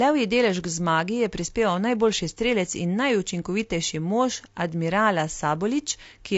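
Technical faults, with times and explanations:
Throughout, low-delay AAC compression: the speech has a rough, grainy texture, with a noisy haze filling the gaps between pitch harmonics and a top band that sounds thin and partly synthetic. The likely cause is a low-delay codec such as AAC-ELD, whose short frames of about 10 ms separate harmonics poorly and spend bits inefficiently. The plainly audible damage fits a bitrate of around 32 kbps.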